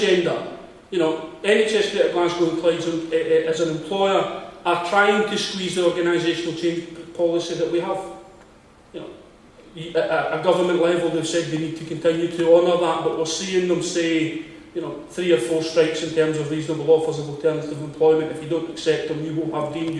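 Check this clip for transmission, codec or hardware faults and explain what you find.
No faults turn up anywhere in this clip. There is nothing in it that calls for a fix or further investigation.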